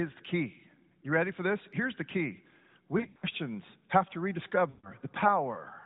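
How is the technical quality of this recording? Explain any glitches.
The recording has two glitches, both lost AMR speech frames. It was coded with narrowband mobile AMR, which caps the sound at 4 kHz and adds light coding colour consistent with the 12.2 kbps mode.

From 2.98 to 3.27 s, then from 4.70 to 4.91 s, the speech smears and briefly fades. Radio errors corrupted frames. The decoder repeated the last good settings with falling gain. The first stretch has scattered losses, the longest run about 80 ms, so it warbles.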